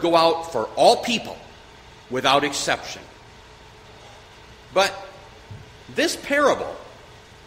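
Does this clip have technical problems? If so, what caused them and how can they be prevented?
No, nothing in this clip stood out as a technical problem on listening, so there is nothing here that needs a cause or a fix.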